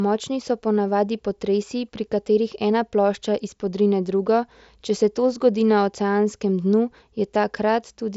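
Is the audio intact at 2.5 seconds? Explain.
Yes, the audio is intact at 2.5 seconds: the speech there carries only the normal character of the Bluetooth mSBC headset codec, with nothing above about 7.7 kHz.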